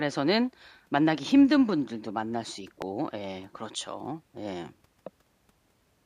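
An electrical switching spike lands at 2.82 s in this speech clip, heard as a single sharp snap sitting on top of the talking and peaking around -15 dBFS. The click is far too brief and abrupt to come from the speaker or the room. It likely comes from a nearby switch, relay or static discharge arcing for an instant, with the audio line or input stage picking up that burst of interference and adding it directly to the signal.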